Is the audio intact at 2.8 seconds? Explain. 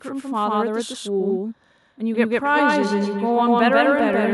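No. At 2.8 s the clip has a doubled audio track that runs throughout: a second full-band copy sits roughly 150 ms behind the original at about the same level, with no decay or room colour. It is likely captured twice by a slower path or held out of step by an edit. On a waveform, every burst has an equal-height twin a fixed distance later. On a spectrogram, each syllable's pattern repeats exactly, undimmed.

A feedback echo between two devices also runs from 2.45 s to 4.33 s. One device replays another's microphone feed, and that microphone picks it up again. The speech therefore returns about every 200 ms, loudest at about 9 dB below the direct sound and thinner and more ringing each pass. A spectrogram shows fading, narrowing copies of each syllable at regular spacing.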